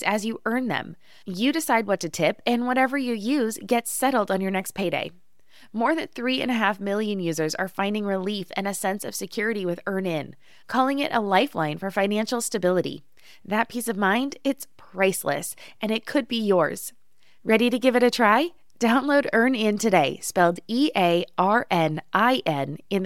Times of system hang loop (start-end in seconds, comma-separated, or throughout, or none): none